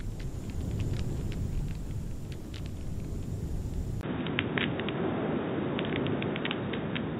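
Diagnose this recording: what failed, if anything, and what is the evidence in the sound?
At 4.01 s, after a 20 ms gap, the input likely switched to a poorer device. Nothing above 3.8 kHz remains. Faint new noise appears.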